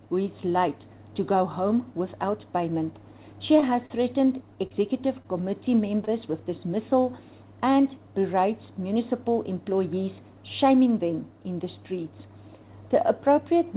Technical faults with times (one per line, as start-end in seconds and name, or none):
3.60-3.65 short stall from a late packet
3.86-4.03 short concealed packet loss
4.67-4.73 short concealed packet loss
5.22-5.28 short stall from a late packet
6.05-6.10 short stall from a late packet